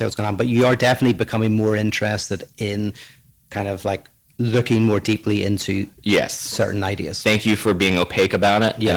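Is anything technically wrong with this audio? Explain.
Yes. Hard clipping runs through the whole speech clip. The signal is driven about 13 dB past what a stage can pass, so a few percent of samples hit the limit and peaks are sliced flat. On the waveform, loud syllables show squared-off plateaus. On the spectrogram, those instants throw vertical smears of harmonics high up the band, heard as harsh crackly fuzz on every loud sound. The light Opus voice compression underneath keeps full bandwidth and sounds like a moderate hybrid-mode bitrate.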